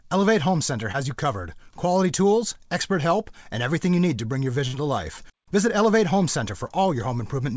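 At 0.92 to 0.96 s there is a short concealed packet loss. About 20 ms of audio never arrived in time, and the receiver covered the hole with roughly 17 ms of continued sound before blending back into the real signal. It is heard as a brief smear or wobble. The same fault returns at 6.67 to 6.72 s, where about 28 ms of fill covers a 20 ms gap. That one is a touch longer.

At 4.68 to 4.75 s a burst of packet loss takes out about 60 ms. Here the concealment stretches the last sound for around 56 ms and fades it, giving a held buzz or dying hiss. Playback then resumes further on, with that stretch of the original missing. The gap is several times longer than the short losses, and the fill audibly decays, which sets it apart from their quick smear.

Throughout, nothing above 8 kHz is present, which fits a G.722 call path at 64 kbps.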